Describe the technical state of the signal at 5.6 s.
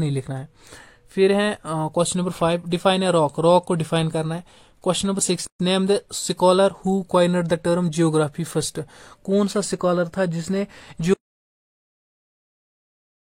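A gap at a join of encoded pieces runs from 5.47 to 5.60 s: 131 ms of untrimmed encoder padding. Unlike a dropout, the sound resumes exactly where it stopped, with smeared edges.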